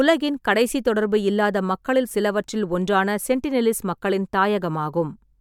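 No technical faults can be heard anywhere in the recording.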